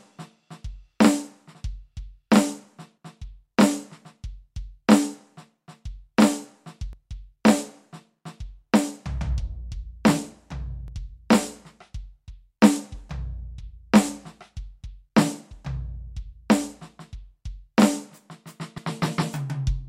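At 6.93 s and again at 10.88 s the music skips forward, losing roughly 50 ms each time with the two sides butted together. This is likely audio missing between chunks, dropped as processing moved from one 4-second block to the next.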